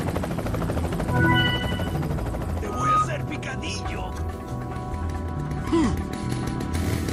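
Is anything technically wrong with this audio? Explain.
Yes, there are two faults.

From 2.64 to 3.09 s there is loudspeaker feedback squeal. The microphone picks up its own loudspeaker, and at 1.2 kHz the loop gain exceeds one. That tone swells over roughly a third of a second into a steady squeal, peaking at about 5 dB above the programme.

From 6.33 to 6.58 s there is DAB burbling. Weak reception lets bit errors, a small fraction of a percent, slip past error correction into the MP2 data. This corrupts sub-band levels across what sounds like about a dozen frames.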